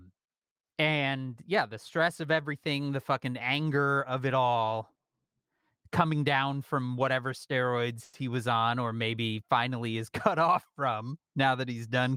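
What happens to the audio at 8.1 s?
Packets most likely stalled in transit, leaving the jitter buffer empty, so the receiver stretched the last sound it had into a call audio freeze from 8.03 to 8.15 s, just after "down from whatever steroids". About 100 ms of filler is heard as a brief buzzy smear rather than silence. When delivery resumes, "he was" carries on exactly where it stopped, nothing lost, but everything after now runs roughly 100 ms late.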